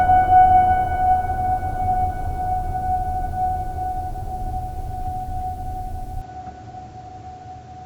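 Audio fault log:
6.22–7.85 s, input switched to a poorer device: The music suddenly loses its top end, with nothing above 7.6 kHz, and turns duller. There is no gap and no clear level jump. A faint new noise floor appears, far below the music. A narrower-band microphone likely took over.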